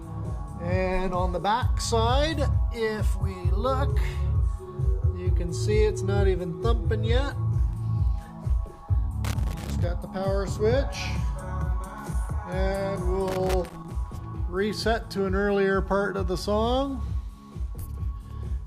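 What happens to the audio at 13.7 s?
A loose connector crackle runs from 13.28 to 13.92 s: a worn contact making and breaking rapidly chops the signal into an irregular burst of scratchy crackle.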